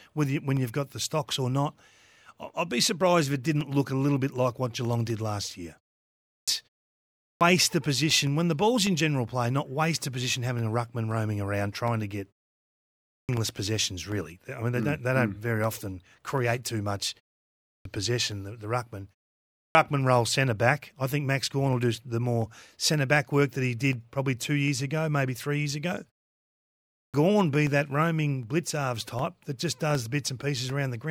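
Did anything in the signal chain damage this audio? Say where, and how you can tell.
Yes. The damage is at playback, as clipped starts after pauses: speech resumes abruptly without its opening sounds at 6.13, 7.08, 12.96, 17.5, 19.42 and 26.79 s, each time losing 330 to 350 ms after a gap of only 0.36 to 0.76 s. The output device is dropping into a low-power state during the short silence and taking about a third of a second to wake. Muted pauses alone would silence only the gaps and never cut into the speech.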